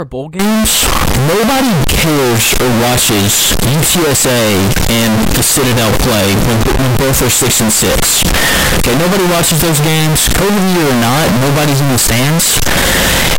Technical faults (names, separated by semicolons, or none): float read as integer